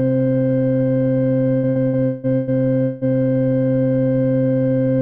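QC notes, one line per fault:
1.57–3.04 s, repeated packet loss (robotic sound): the music drops out six times in under 1.5 s, with gaps up to 180 ms. Each hole is bridged by extending the preceding sound, so about 45% of the stretch is synthetic fill, giving a choppy texture with pieces missing.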